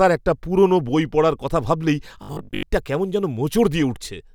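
Starting at 2.23 s, just after "বই পড়ার কথা ভাবলেই", new audio likely stopped arriving on time, so the playback side kept reusing a short stored buffer, around 20 ms long, in place of most of the real signal. Until 2.63 s, where "কেমন যেন" follows, this robotic sound from repeated short buffers imposes a steady 50 Hz buzz, turning the speech into a rigid, metallic drone that only loosely tracks its syllables.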